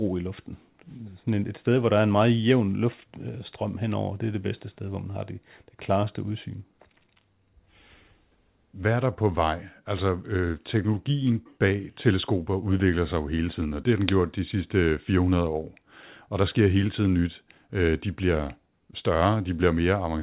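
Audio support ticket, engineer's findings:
Findings: no fault found; the speech passes through the G.711 mu-law call path at 64 kbps as expected, with nothing above 4 kHz.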